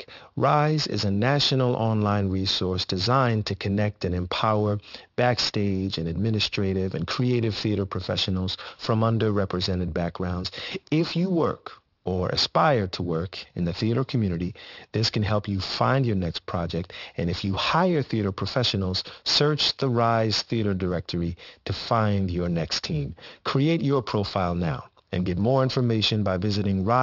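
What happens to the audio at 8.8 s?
At 8.8 s you're hearing aliasing, and it runs through the whole clip. The speech was resampled down, which fits a 12 kHz rate, without an anti-alias filter. Content above 6 kHz folds back to unrelated pitches at roughly -15 dB relative to the speech, so the sibilants come out gritty and metallic.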